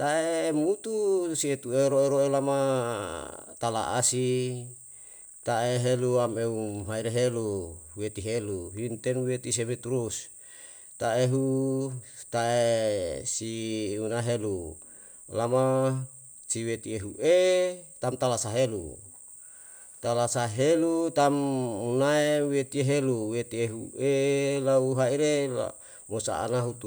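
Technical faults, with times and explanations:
No technical faults can be heard in this recording.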